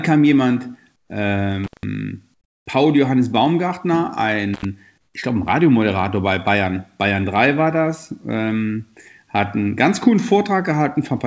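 Comfort noise in place of the background is heard first from 0.96 to 1.10 s, again from 2.34 to 2.66 s, and once more from 4.98 to 5.14 s. In each pause the natural room sound gives way to a flat, featureless hiss, about 13 dB, about 15 dB and about 6 dB quieter respectively, before the real background returns with the next sound. The likely cause is discontinuous transmission: the sender's voice detector stopped sending during these quiet stretches, and the receiver filled the 140, 320 and 160 ms gaps with synthesized noise that only roughly matches the original background.

Intermittent contact occurs from 1.64 to 1.83 s and again from 4.54 to 4.65 s. A loose plug or cable opened the line briefly, for about 169 ms and then about 72 ms. Each time the audio drops out abruptly, with crackle at both edges where the connection breaks and remakes, leaving only faint hiss while the line is open. 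Everything here sits below 8 kHz, which fits a wideband call codec on the path.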